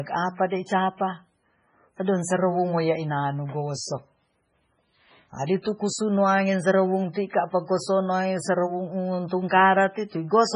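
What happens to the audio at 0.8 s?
At 0.8 s the speech carries heavy MP3 compression damage, as it does throughout the clip. Nothing sounds above 10.5 kHz. A starved encoder, likely near 16 kbps, cut the treble and dropped weak frequency lines frame by frame. The sound turns watery and swirly.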